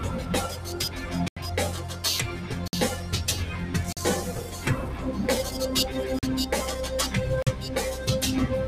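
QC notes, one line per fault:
1.28 to 7.47 s, block of digital silence: five hard dropouts, at 1.28 s (85 ms), 2.68 s (54 ms), 3.93 s, 6.19 s and 7.42 s (43 ms each). The audio snaps straight to silence and back with no fade, so the longer ones read as short holes. The lengths point to an output buffer that wasn't filled in time, which fits blocks of 4096 and 2048 samples at 48 kHz.
1.78 to 2.04 s, sound cut by the noise suppressor: here the suppressor mistook part of the sound for noise and pulled it down by about 5 dB, with the effect spreading over roughly a third of a second. What you hear is the sustained part sagging and its tail getting clipped short, because the gain reduction hits steady and decaying material hardest while quick onsets mostly slip through.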